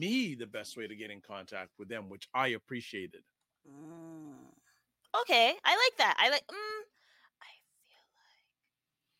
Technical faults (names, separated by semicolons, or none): none